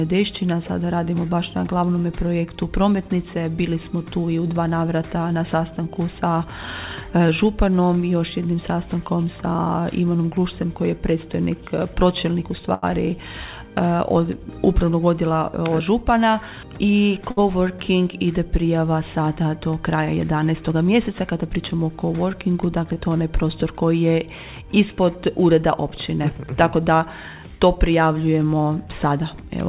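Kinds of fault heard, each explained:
Short stall from a late packet: Twice a packet shows up late, the buffer runs dry, and the last bit of sound gets stretched until it arrives. At 12.74 s it's held about 85 ms, and at 17.31 s about 64 ms. Nothing is lost, but the sound hangs briefly.
Jitter buffer speed-up: From 15.22 to 15.90 s the receiver is draining a backlog by snipping out tiny pitch-period chunks over and over. That stretch runs roughly 11% fast at the same pitch, trimming something like 70 ms, so it comes across a bit rushed.
Short concealed packet loss: Around 22.94 to 22.98 s about 20 ms of audio never arrived in time. The receiver papered over the gap by extending the previous sound before blending back in, and you hear it as a tiny smear or wobble.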